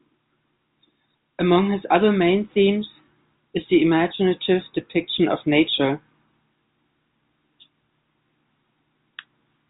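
Nothing goes wrong at any point in this speech, which comes through G.711 telephone coding.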